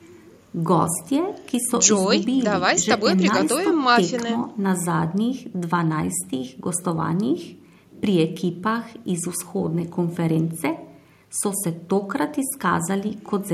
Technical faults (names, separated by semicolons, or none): none